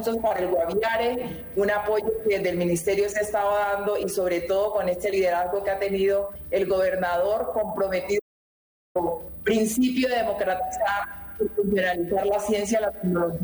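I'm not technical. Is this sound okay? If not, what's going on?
No, there's one problem. At 8.20 s the sound suddenly cuts out to dead silence, and it comes back at 8.95 s, so about three quarters of a second is simply missing. That's an audio dropout to silence. Even the background room tone vanishes, which tells you the recording kept running while nothing was coming in, most likely because a cable or wireless link briefly lost contact. Whatever happened in that gap can't be recovered.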